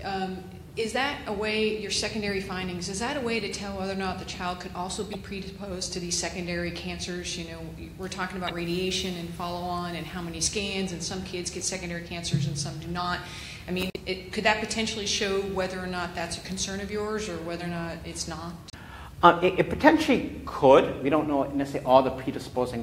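Damaged data in the compressed stream causes brief glitches at 5.11, 8.45, 13.89 and 18.70 s as the decoder misreads corrupted frames and resyncs.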